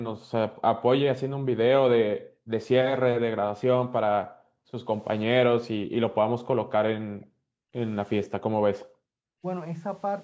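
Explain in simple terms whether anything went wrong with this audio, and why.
Two things in the call's echo handling misbehaved. First, background gated by the echo canceller: while the far end's loudspeaker was playing, the canceller clamped down hard on the microphone, treating room sound as echo. The quiet background around the speech drops away almost to nothing, then comes back, from 0 to 1.48 s, 2.18 to 2.51 s, 4.22 to 4.82 s, 5.78 to 7.74 s and 8.38 to 9.14 s. The longest dip lasts about a second.

Second, an echo leak: the canceller likely failed to scrub out everything its microphone picked up from the loudspeaker, so a leftover copy was sent back down the line. Between 8.24 and 8.85 s a faint, delayed repeat of the speech trails behind the original by roughly half a second. It is quiet, well below the main voice, but audible as a ghostly second copy.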